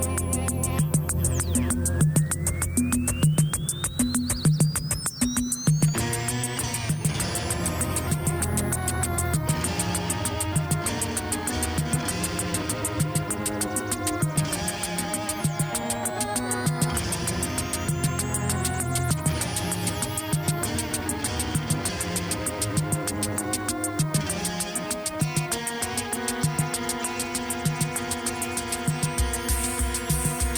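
From 7.59 to 9.59 s, the adaptive stream drops to a lower bitrate for two seconds. Codec artefacts rise. The switch is abrupt, with no gap. The quality change fits a slowed connection forcing roughly 64 down to 24 kbit/s.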